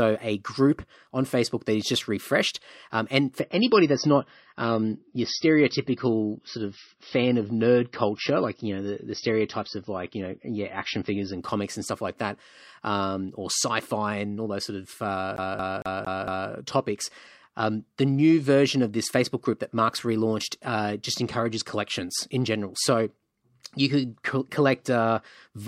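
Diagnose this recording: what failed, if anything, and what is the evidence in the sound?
The failure is at the network stage, where an adaptive stream switched to a lower bitrate. From 3.40 s to 11.40 s the treble collapses, with nothing above 6 kHz. The sound turns thinner and more synthetic, and codec smearing rises. Both edges are abrupt, with no gap. Full quality returns just before "comics and stuff like". The loss of bandwidth fits a player dropping from about 128 kbit/s MP3 to about 24 kbit/s MP3 while the connection was slow.

The second failure is at the storage and playback stage: a CD stuck on one turn. Just after "all those sort of", from 15.36 s to 16.50 s, the same 228 ms slice plays five times. A brief mute falls at each jump. The result is a fast, even, mechanical stutter. A scratch keeps throwing the laser back by one track at the same point on the disc, so each revolution repeats the fragment.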